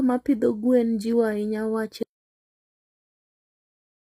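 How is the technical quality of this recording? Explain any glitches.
The technical quality is poor. The speech is heavily damaged by compression throughout, and the sound then cuts out about halfway through and never returns.

Low-delay AAC compression affects the whole clip. The likely cause is AAC-ELD, the low-delay codec used for video calls. It codes each short frame as a few hundred frequency lines. Too few bits were available, which fits a rate of about 24 kbps. The voice turns rough and grainy. Noise fills the gaps between harmonics. The top band is dulled or sounds synthetic.

An audio dropout to silence begins at 2.03 s and lasts to the end. The speech stops abruptly and what follows is pure silence, with no room tone. The likely cause is a loss of the input, through a disconnected device, a failed link or an accidental mute, while recording carried on. Whatever was said after that point is lost.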